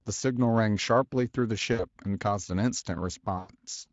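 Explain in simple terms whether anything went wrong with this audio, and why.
Two short dropouts happened, caused by VoIP packet loss concealed by the speech codec. Pieces of the call went missing, near 1.73 to 1.85 s and 3.37 to 3.52 s. The decoder filled each gap by stretching the last speech into a fading buzz.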